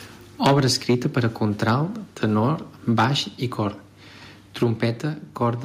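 Speech recorded with the microphone input set too hot shows repeated microphone overload. The likely cause is input volume so high that the loudest peaks exceed the converter's limit, by about 12 dB across 0.44 to 1.76 s, about 4 dB at 2.23 to 2.25 s, about 6 dB at 2.89 to 3.05 s, and about 4 dB at 4.62 to 4.84 s. The tops of the waveform are flattened, so those stretches take on a harsh, crackling edge. In the brief burst at 2.23 s a sizeable share of the samples is cut off. The overloads also trigger a microphone volume step-down, likely the call software detecting clipping and cutting the device's input volume in a single step. This happens at 0.47 s by about 3 dB and again at 4.63 s by about 4 dB. Each time, the voice and the background drop together in level, abruptly, just as the distortion begins.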